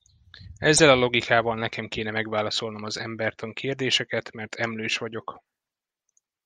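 From 0.76 to 0.80 s, just before "a logikával nekem kéne", the speech skips ahead with a brief garbled glitch. This is likely a broken MP3 bit reservoir: frames were lost, and the following frame, whose timing fits 24 ms frames, borrowed data from bytes that no longer belonged to it.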